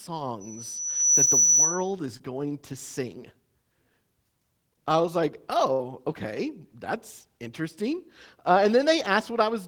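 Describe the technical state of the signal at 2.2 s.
Short concealed packet loss spans 2.17 to 2.21 s, just before "going to sing": the receiver extended the preceding sound over the gap, leaving a brief smear rather than a silent dropout.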